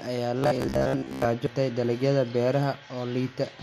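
From 0.39 to 1.25 s the speech turns into a rigid, metallic buzz pinned near 66.7 Hz, still loosely tracking the words. This is robotic sound from repeated short buffers, likely caused by audio arriving too seldom so the last 15 ms or so is looped for most of that stretch while real audio is skipped. At 1.47 s the sound glitches, the mark of damaged data in a compressed stream: the decoder misreads the corrupted frames, loses sync and jumps to the next frame header it can find.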